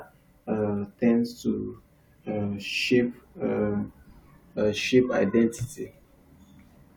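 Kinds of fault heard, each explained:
Stream segment skipped: At 4.56 s the speech jumps forward abruptly, with a brief blip at the join and no smooth transition between what comes before and after. The likely cause is a segment of the stream that failed to load, so the player moved straight on to the next one. The section that segment carried, typically a second or more, never reaches the listener, leaving a discontinuity in the programme.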